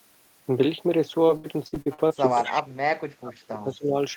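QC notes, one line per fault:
1.27–2.12 s, repeated packet loss (robotic sound): seven gaps, the longest 71 ms, with about 250 ms patched by stretching the preceding audio, roughly 29% of the span. The rapid succession of fills and holes gives a choppy, mechanical quality with fragments missing.
2.43–2.62 s, echo leak: a delayed copy of this side's own speech returns about 219 ms late, around 10 dB below the main signal. This is likely a loudspeaker echo the far side's echo canceller failed to remove fully and sent back.
2.43–2.95 s and 3.16–3.95 s, speech suppressed in double talk: the speech repeatedly dips, by as much as about 30 dB, over roughly 400 ms and 500 ms. This is likely the echo canceller turning down its own talker along with the loudspeaker echo while both sides talk at once.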